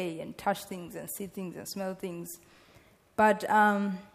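No technical faults are audible anywhere in the recording.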